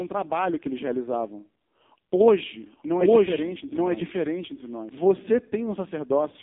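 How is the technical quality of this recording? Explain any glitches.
Technical quality is poor: heavy narrowband coding colours the whole recording, and part of it is doubled.

AMR narrowband mobile codec, throughout: the speech has passed through AMR-NB, which rebuilds the voice from a vocal-tract model and a few pulses per frame. The heavy coding damage and the buzzy, synthetic timbre fit a very low mode near 5.15 kbps. The band is squeezed to roughly 200 Hz to 3.6 kHz, with nothing above 3.7 kHz, so the speech sounds thin, muffled and telephone-like.

Doubled audio track, from 2.27 to 4.89 s: a second full-band copy of the speech runs about a second behind the original at roughly the same loudness, so two overlapping streams compete. The copy is dry, with no decay or added room sound, and it cuts in and out abruptly at those times. The likely cause is the same audio being captured again through a slower path, or an edit that leaves two out-of-step copies.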